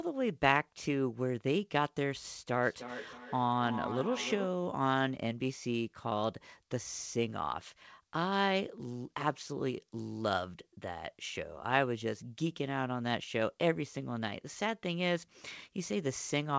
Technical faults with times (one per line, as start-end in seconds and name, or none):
2.63-4.71 feedback echo between two devices